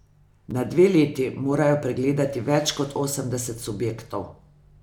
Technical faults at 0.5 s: block of digital silence

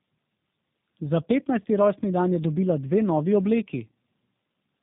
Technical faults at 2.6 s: tandem speech coding

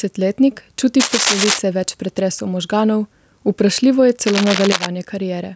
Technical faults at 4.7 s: gain pumping; cable scratch noise

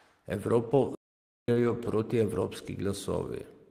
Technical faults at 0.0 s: none

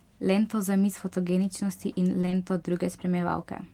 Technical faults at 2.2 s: short concealed packet loss

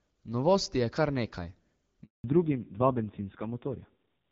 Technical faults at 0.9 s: none

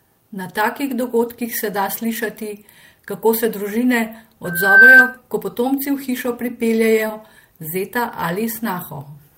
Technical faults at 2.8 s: none

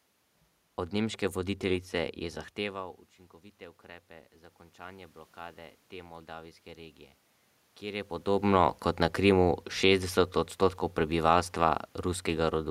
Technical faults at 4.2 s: automatic gain rising

